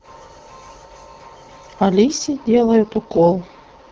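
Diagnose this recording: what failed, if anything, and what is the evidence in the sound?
AMR rate drop from 2.04 s, network stage: speech turns rough and synthetic without a gap or band loss, as AMR-WB falls to 6.6 kbit/s.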